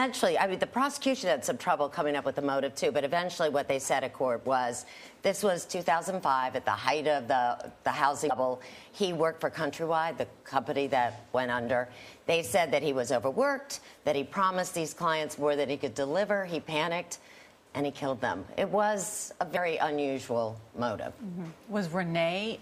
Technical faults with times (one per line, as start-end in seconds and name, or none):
8.27-8.31 damaged data in a compressed stream
19.53-19.57 damaged data in a compressed stream